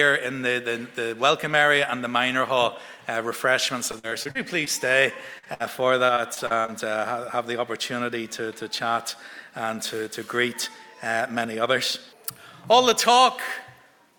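From 3.91 to 4.68 s there is repeated packet loss, heard as robotic sound. Six short gaps, none longer than 45 ms, are patched by stretching the last sound. About a fifth of the stretch is filled this way, so the audio turns choppy.

At 5.38 to 5.45 s comes a burst of packet loss. About 47 ms is bridged by continuing the last sound as it fades. Then the audio jumps ahead.

Right after, at 5.45 to 5.48 s, short concealed packet loss leaves a brief smear. Only a few milliseconds are patched before the real sound blends back.

A second burst of packet loss follows at 5.54 to 5.62 s. About 58 ms is bridged by continuing the last sound as it fades, and the sound resumes with a piece missing.

From 6.06 to 6.70 s, repeated packet loss returns. Again there are six gaps, each at most 45 ms. About a quarter of this span is concealment.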